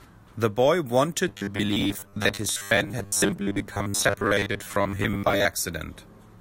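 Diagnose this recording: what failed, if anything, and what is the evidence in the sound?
The driver buffer was likely starved, so blocks repeated for about half the time. From 1.28 to 5.45 s this gives robotic sound from repeated short buffers, a rigid 100 Hz buzz that fits 10 ms repeats.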